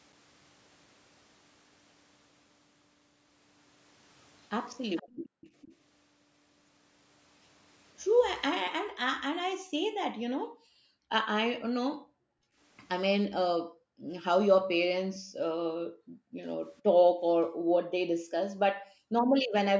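Speech clip with echo leak at 4.96–5.73, 15.15–15.19 and 16.77–16.82 s: a faint delayed copy of the speech trailing by about 457 ms, likely from a loudspeaker echo canceller letting residue through. It shows as a weaker ghost of earlier spectrogram patterns, roughly 20, 30 and 40 dB down. Background gated by the echo canceller occurs at 5.09–5.41, 8.71–11.11, 11.94–12.59 and 13.41–19.36 s, where the room floor drops by about 40 dB and appears as dark, near-silent gaps between speech on the waveform and spectrogram. Above all this, the spectrogram is empty beyond 8 kHz, as expected from call microphone processing.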